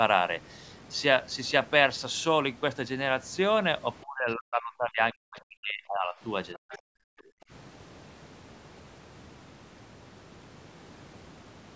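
From 4.02 to 6.16 s the talker's speech is pulled down hard in pieces, sinking by something like 40 dB at its deepest and missing for about two seconds in all. That is speech suppressed in double talk. The pattern points to the other side talking at the same moment, with the echo canceller likely unable to tell the talker from the loudspeaker echo and so turning everything down. What sets this apart from a network dropout is that the loss follows the overlap.

At 6.53 to 6.78 s a second, quieter voice slips through, around 20 dB below the talker. This is the other side's voice leaking through, likely echo the canceller did not fully remove from the microphone. Unlike crosstalk in the room, it arrives as a scrap of loudspeaker sound rather than a present speaker. Overlapping it, from 6.55 to 6.97 s, the talker is again suppressed in double talk, dipping by roughly 40 dB for close to half a second.

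From 7.25 to 7.5 s the room sound itself drops by about 33 dB for a moment and then returns. This is background gated by the echo canceller, which clamped the microphone while the loudspeaker played. It differs from speech suppression because the steady room tone drops out and comes back, a gate on the ambience rather than a loss within the voice. The call's microphone processing, which leaves nothing above 8 kHz, is normal behaviour, not a fault.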